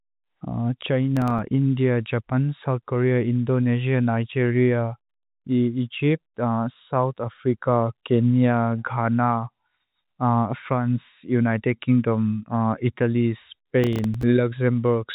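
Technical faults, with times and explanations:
1.17–1.39 s and 13.84–14.23 s, processor overload crackle: repeated missed processing deadlines leave tiny silent gaps of a few milliseconds each. The hard edges make a gritty crackle. The waveform shows short flat dropouts, and the spectrogram thin vertical broadband streaks up to the 3.8 kHz telephone-band ceiling.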